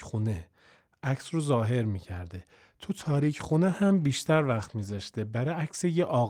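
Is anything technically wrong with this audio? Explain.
Yes. From 2.9 s to the end, there is a call bitrate drop: the encoder's budget falls from 48 to 18 kbps, staying at its lowest for about 1.9 s. Coarser Opus coding and a trimmed top end make the speech rough, watery and muffled.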